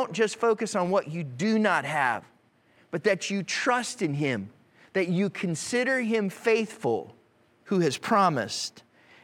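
No technical faults can be heard at any point in the speech.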